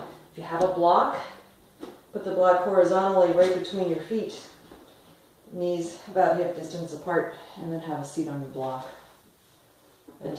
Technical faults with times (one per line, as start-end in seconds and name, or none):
none